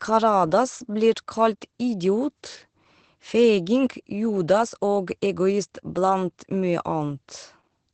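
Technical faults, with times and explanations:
Throughout: Opus voice compression. The top end is simply gone, with nothing above about 8.6 kHz, so the speech has that boxed-in wideband feel. The linear-prediction coder is also rationing bits for the excitation, which is where the hoarseness and faintly robotic grain come from. The damage is plainly audible, and it fits the SILK mode running at around 12 kbps with 20 ms frames.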